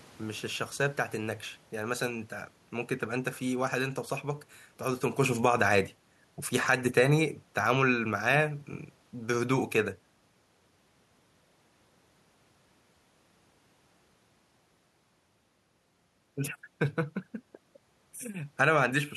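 Speech recording in which the automatic gain falling shows up between 6.55 and 8.56 s. The level control judged the input too hot or its background noise too strong and pulled its gain down by about 3 dB over those two seconds, so the voice sinks and the room noise behind it drops by the same amount. The level change a little earlier, around 5 s, sounds like the talker shifting position at the microphone, not the gain stage.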